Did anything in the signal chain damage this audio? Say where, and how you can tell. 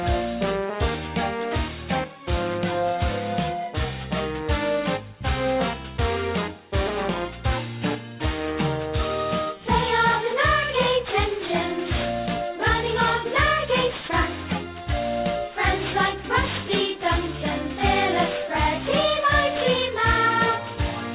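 Yes, there's aliasing throughout, introduced at the sample-rate conversion. The top of the spectrum runs hard up to a 4 kHz edge, and high content comes back gritty at wrong pitches, only about 15 dB under the signal. That fits a drop to 8 kHz with no anti-alias filter, so everything above 4 kHz folded back down.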